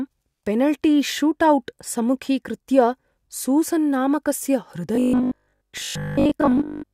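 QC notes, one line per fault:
4.95–6.93 s, robotic sound from repeated short buffers: new audio likely stopped arriving on time, so playback kept looping the last 20 ms chunk while the real signal in between was dropped, with most of this stretch made of repeats rather than fresh audio. Those 20 ms loops stamp a fixed 50 Hz pitch onto the speech, turning it into a stiff, metallic buzz that roughly tracks the syllables until the clip ends.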